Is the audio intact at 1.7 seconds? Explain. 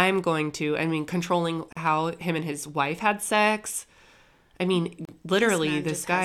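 No. A gap at a join of encoded pieces opens from 1.73 to 1.77 s, right after "to I mean controlling" and before "how him and his". The speech was encoded in separate pieces and spliced without trimming, so the silent encoder delay at the start of one piece and the padded final frame of the other both remain. The result is a 41 ms dropout with smeared edges, after which the speech resumes exactly where it stopped.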